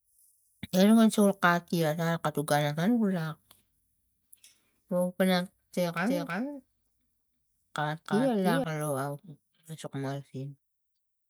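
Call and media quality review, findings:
Doubled audio track, 6.06–8.64 s: speech repeated around 300 ms late, about 5 dB quieter, full-band, no decay. Spectrogram shows formant patterns shadowed by a fainter copy; hard onset and cutoff. Likely a second, slower capture path mixed in.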